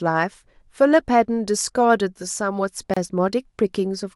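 A gap at a join of encoded pieces opens at 2.94 s: separately encoded segments were spliced untrimmed, leaving about 28 ms of silence with smeared edges before the speech resumes.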